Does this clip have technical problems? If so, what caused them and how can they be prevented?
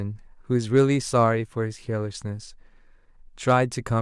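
Yes. Hard clipping occurs from 0.76 to 1.24 s. During that stretch the speech peaks exceed what the signal path can carry by about 2 dB, so the tops of the waveform are sheared off flat instead of rounding over. Those squared edges generate harmonics well above the natural spectrum of the speech, heard as a brief crackle riding on the loudest moments. To prevent it, lower the gain before that stage and leave several decibels of headroom.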